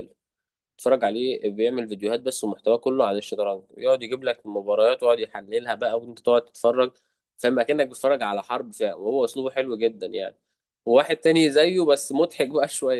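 No faults detected in this speech recording; the Opus voice compression at 24 kbps is audible only as light coding texture across the full band.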